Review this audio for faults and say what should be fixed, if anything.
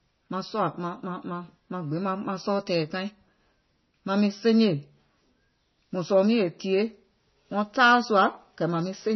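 Throughout the speech, everything above 6 kHz is missing, and weak detail flickers between frames, giving a watery, swirly quality and smeared onsets. The likely cause is heavy MP3 compression, which fits a bitrate near 24 kbps. A spectrogram shows a hard ceiling at 6 kHz with patchy, speckled holes below it. To prevent it, encode from the original at a much higher bitrate or with a codec built for low-rate speech.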